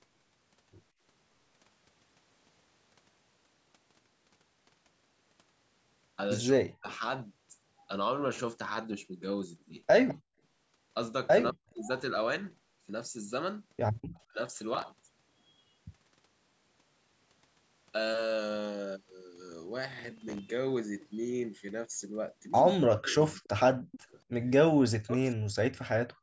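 At 6.54 to 6.89 s, 11.52 to 11.77 s and 14.28 to 14.39 s the speech dips sharply, by about 40 dB (about 30 dB at 14.28 s), losing brief stretches of the talker. This is speech suppressed in double talk. The echo canceller likely mistook overlapping far-end sound for echo and pulled everything down.

From 10.08 to 10.15 s a faint scrap of the voice returns about 203 ms late, about 15 dB below the speech. This is echo leak: likely residual loudspeaker pickup that the far side's canceller failed to remove.

From 14.75 to 15.09 s and again from 19.93 to 20.39 s, a gritty crackle tears across the sound, made of tiny hard-edged repeats of old audio. This is processor overload crackle. Run after run of missed deadlines, each around 3 ms long, fits a small processing buffer that the overloaded processor could not fill in time.

From 22.74 to 24.12 s the voice is again suppressed in double talk, by about 40 dB in pieces totalling roughly 0.7 s. 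Overlapping this, from 23.07 to 23.99 s, a longer echo leak trails the voice by 237 ms at about 20 dB down.

From 25.04 to 25.4 s a final double-talk suppression cuts the speech by about 40 dB. Throughout, the call's microphone processing limits the audio to nothing above 8 kHz.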